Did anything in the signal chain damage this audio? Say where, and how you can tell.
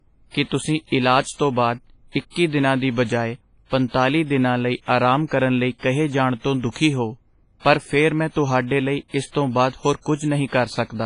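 Yes: WMA compression, likely at the codec stage, damages the whole speech clip. Its long transform blocks leave a ringing, washy hiss, nothing above 10.5 kHz, which fits about 24 kbps.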